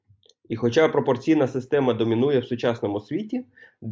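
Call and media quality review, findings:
No audible faults found in the speech clip; nothing to report against any component.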